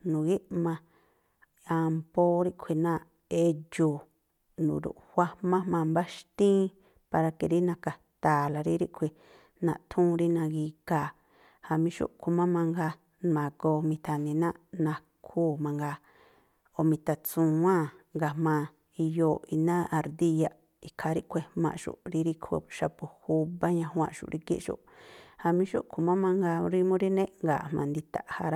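No technical faults occur at any point in the speech, so there is nothing to describe in time order.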